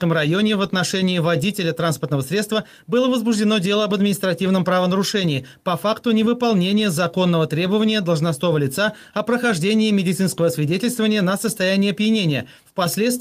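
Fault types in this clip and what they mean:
No audible faults are present in this recording.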